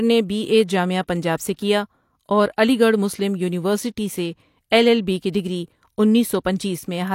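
At 1.56 s a short hiss rises for about 26 ms before a sharp speech onset at 1.59 s, a pre-echo. The transform codec spread quantisation noise meant for the loud attack across its whole block. A spectrogram shows a broadband smear ahead of the onset.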